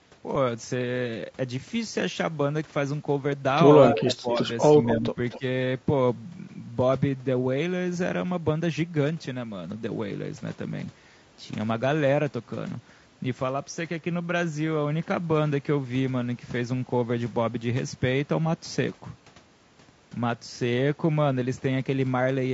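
Speech across the whole clip has a rough, grainy texture, with noise filling the gaps between pitch harmonics and a top band that sounds lowered or synthetic. This is low-delay AAC compression, likely AAC-ELD. Its short frames resolve harmonics poorly and spend bits inefficiently, and the damage here is plainly audible, which fits a low bitrate of around 32 kbps. Between 3.92 and 5.43 s the call shows speech suppressed in double talk: the talker's level dips, thins and breaks into pieces while the far side is also talking. The likely cause is an echo canceller that cannot tell its own talker apart from loudspeaker echo and so attenuates both. The deepest dip, about 20 dB, falls in 3.92–4.42 s. Shorter dips of about 10 dB follow at 4.96–5.19 s and 5.38–5.43 s. Within that same stretch is echo leak, a delayed copy of the speech arriving about 250 ms late, at 3.93–4.12, 4.35–4.41, 4.62–4.95 and 5.30–5.40 s. 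It sits roughly 10 to 25 dB below the direct speech and is strongest in the 4.62–4.95 s stretch. The likely source is a loudspeaker endpoint whose echo canceller left part of the microphone pickup in place and sent it back into the call.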